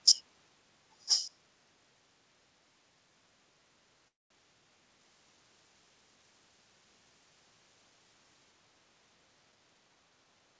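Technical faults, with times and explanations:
1.05–1.31 s, echo leak: A faint, delayed copy of the sound appears, roughly 10 dB below the main signal and trailing it by about 1 s. The likely cause is a far end playing the call on a loudspeaker, with its echo canceller letting part of the pickup through and sending it back. On a spectrogram, a weaker ghost of earlier harmonic patterns sits under the current energy. The waveform shows low-level extra ripple.
2.55–3.09 s and 6.52–7.34 s, background gated by the echo canceller: The room tone dips audibly, by up to about 7 dB in the first event and about 6 dB in the second. Each dip lasts around half a second to 0.7 s, then the background returns. The echo canceller clamped the microphone down while it judged the loudspeaker to be active, then released it. A spectrogram shows the noise floor between sounds darkening across all frequencies. The waveform's quiet sections drop in amplitude and then recover.
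4.08–4.32 s, call audio freeze: The last sound is stretched into a short fading buzz that decays to near silence for about 200 ms. The audio then resumes exactly where it left off, so about 224 ms of time is inserted and nothing is lost. This likely happened because packets stalled in transit and the jitter buffer ran dry. On a spectrogram, smeared, steady bands fade to a blank gap. The waveform flattens to near zero before the signal restarts.
5.01–8.52 s, pre-emphasis left on: The treble is boosted and never cut back, so the sound turns thin, bright and hissy, with exaggerated sibilance. The tilt matches the CD 50/15 µs emphasis curve, rising toward about 8 dB at 10 kHz relative to 1 kHz. Because the call path stops at 8 kHz, the audible lift peaks just below that limit. A spectrogram shows the upper band noticeably brighter than in the surrounding sections, and the waveform looks spikier.
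9.52–10.55 s, jitter buffer speed-up: The audio runs at about 116% speed while the pitch stays the same, which makes it sound hurried. Roughly 150 ms is removed in total. The receiver had too much audio queued and trimmed many short pitch-period slices to bring its delay back down. On a spectrogram, harmonics stay at the same frequencies while events crowd closer together in time. The waveform shows compressed spacing, with occasional tiny splice discontinuities.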